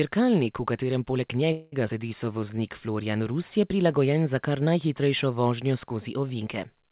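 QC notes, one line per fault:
1.52–1.74 s, call audio freeze: right after "v katerem poleg" the last sound hangs as a fading buzz for about 0.2 s, likely packets stalling and the jitter buffer running dry, then speech resumes with nothing lost.
1.88 s, skip ahead: playback jumps forward, dropping roughly 70 ms of speech, and the two sides are butted together with only a tiny join.
2.25–2.57 s, jitter buffer slow-down: speech drags to 85% speed at unchanged pitch, with pitch periods repeated to add 55 ms of reserve, so sounds stretch.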